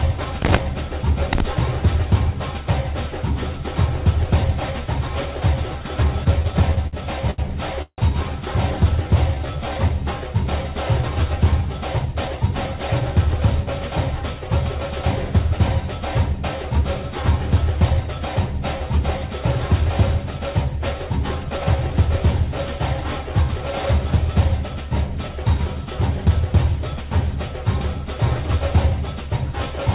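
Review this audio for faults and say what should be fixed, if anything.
Repeated stalls (stutter) run from 6.24 to 6.95 s. The jitter buffer ran dry nine times. Each time, the receiver held the last sound on. About 146 ms was filled in all, with the longest gap 54 ms. That is about a fifth of the span. Nothing is lost, but the audio drags and stutters.

A short stall from a late packet comes at 7.31 to 7.40 s. One packet arrived late. The receiver stretched the last sound for 73 ms, then carried on from the same point. Nothing is missing. The sound is held too long, with a faint buzz or dip.

A call audio freeze follows at 7.82 to 8.00 s. The last sound continues as a fading buzz or hiss, then drops to about 60 ms of silence. In total, 159 ms is inserted before the audio resumes where it stopped. The likely cause is packets held up in transit, emptying the jitter buffer.

Jitter buffer slow-down occurs at 9.02 to 9.75 s and at 21.58 to 21.89 s. 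The receiver was rebuilding its reserve, so it repeated single pitch periods many times. The first stretch plays at 84% speed and adds 126 ms. The second plays at 88% and adds 49 ms. Pitch holds, but sounds are drawn out.

Jitter buffer speed-up occurs at 11.66 to 13.75 s and at 23.86 to 24.45 s. The buffer held more audio than its target, so the receiver cut out short pieces of one or a few pitch periods. The first stretch runs at 111% and drops about 200 ms. The second runs at 114% and drops about 100 ms. The pitch stays the same, but the audio sounds hurried.

To prevent all of these, reduce jitter and late delivery on the network path, and give the jitter buffer a steadier, slightly larger target delay.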